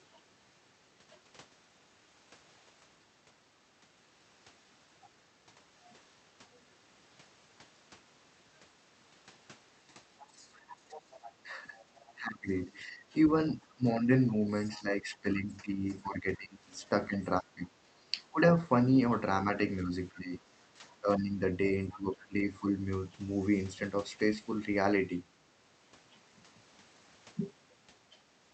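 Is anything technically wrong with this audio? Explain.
Yes. Other side's voice leaking through at 10.19–12.13 s, 13.63–13.73 s, 14.64–14.77 s and 21.89–21.98 s, likely from loudspeaker echo the canceller missed, is a faint second voice well below the talker. Speech suppressed in double talk at 10.9–13.14 s, 13.75–17.71 s, 18.32–18.4 s and 19.83–22.77 s, likely from the canceller ducking overlapping talk, makes the speech dip or drop out in pieces, by up to about 20 dB.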